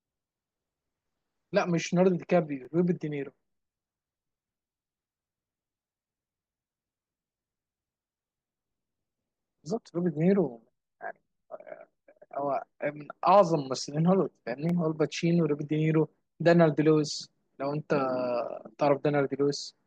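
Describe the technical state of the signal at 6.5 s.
At 6.5 s the speech signal is intact, with no dropout, clipping, glitch or other fault audible at that moment.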